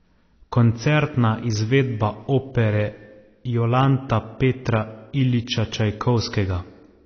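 Speech with AAC compression damage throughout: nothing above 6.5 kHz, dull, smeared and warbly, likely from a low-bitrate AAC-LC encode near 24 kbps; spectrograms show a hard ceiling.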